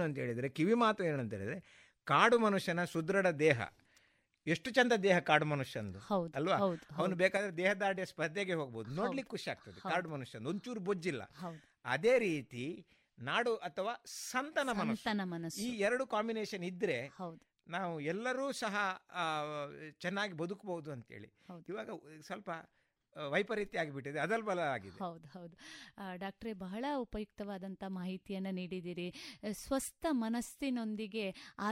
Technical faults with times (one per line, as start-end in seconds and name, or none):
7.37-31.72 one channel drops out